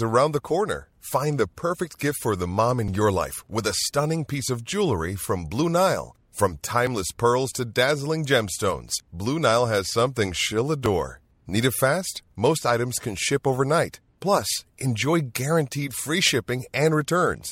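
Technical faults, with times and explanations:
6.87 s and 10.86 s, overlap between stream segments: two tiny skips, just before "pearls to dazzling gemstones" and just after "has something she'll". At each 4 s segment boundary the player dropped about 17 ms of audio it took as duplicate, so the waveform jumps.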